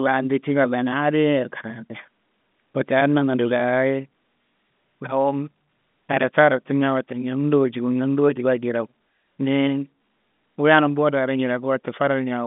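No technical faults are audible.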